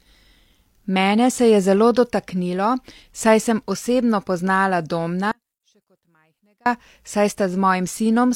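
A speech clip with an audio dropout to a faint residue from 5.32 s to 6.66 s, about 1.34 s long. The speech cuts off abruptly mid-flow and returns just as suddenly, and the gap holds only a faint leak of the sound, roughly 40 dB below its normal level. The likely cause is a break in the signal path ahead of a stage that stayed live. On a waveform the envelope collapses to a thin band with sharp edges, and a spectrogram shows a dim vertical stripe rather than a tapering fade.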